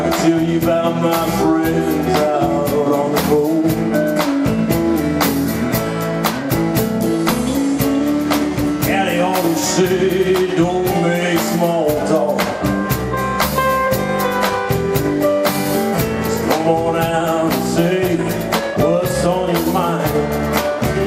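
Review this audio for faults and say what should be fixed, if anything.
Nothing stood out on listening, so there is nothing here that needs fixing.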